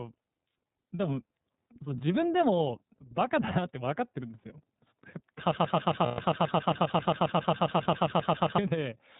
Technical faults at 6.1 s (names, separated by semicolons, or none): iLBC codec; broken-record loop; lost iLBC frames